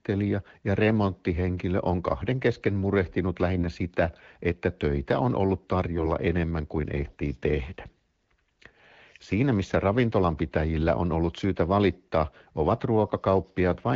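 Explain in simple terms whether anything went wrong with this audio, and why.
AMR bit errors hit at 3.55–3.66 s, after "on kahden kesken murehtinut", and at 5.96–6.08 s, after "että töitä on ollut". Flipped bits in the coded speech misplace its driving pulses, so the voice keeps its pitch and level but briefly turns scratchy and gargly.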